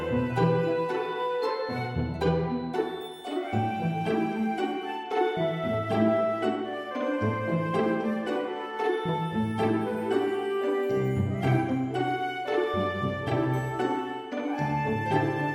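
No technical faults can be heard anywhere in this audio.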